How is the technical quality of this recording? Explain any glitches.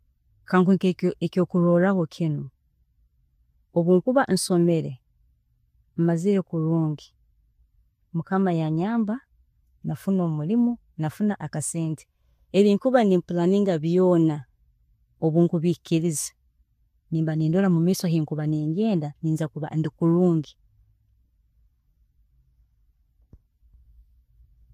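There is one glitch in the speech. At 0.46 s a sharp attack is preceded by a brief hiss, about 19 ms long, and the onset itself sounds softened and smeared. This is pre-echo. A transform codec spreads quantisation noise across a whole block, and here the attack landed late in one, so noise sized for the loud onset also filled the near-silent instant before it, where nothing masks it.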